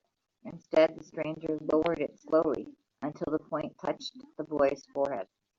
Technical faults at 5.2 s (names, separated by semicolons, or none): damaged data in a compressed stream